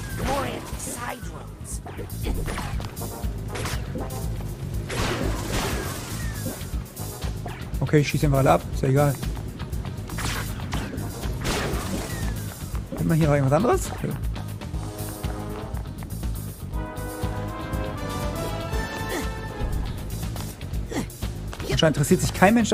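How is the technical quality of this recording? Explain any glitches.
No glitches or technical faults can be heard anywhere.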